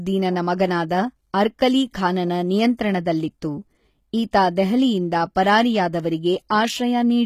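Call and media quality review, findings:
HE-AAC compression, likely cause, throughout the speech: treble sounds synthetic, with gritty, lispy s sounds and nothing above 14.9 kHz. Upper band is rebuilt by copying lower bands upward, so harmonics misalign across the crossover. Plainly audible damage points to a very low bitrate, around 20 kbps.

Pre-echo at 5.35 s and 6.49 s: brief hiss just before sharp attacks, spreading about 10 ms and 16 ms respectively, with the onsets softened. The transform coder spreads quantisation noise across the whole block, so noise sized for the attack leaks into the quiet lead-in.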